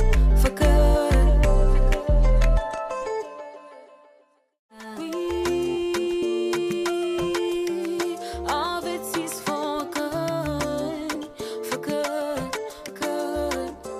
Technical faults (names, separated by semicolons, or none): compressed frames skipped